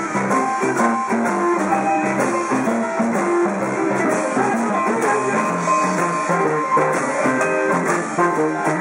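From start to finish there is USB whine: a steady tone fixed at 1 kHz, about 35 dB below the signal. It comes from the bus's 1 ms frame current leaking into the audio through power or ground. On a spectrogram it appears as one unbroken horizontal line at 1 kHz.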